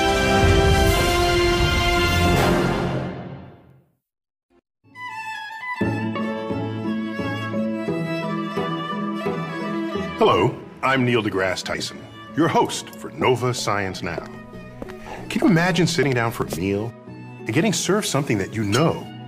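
Dropped buffers (overrun) are likely behind the skips at 11.74, 15.38 and 16.42 s, where the sound jumps ahead with no gap, each losing roughly 20 ms.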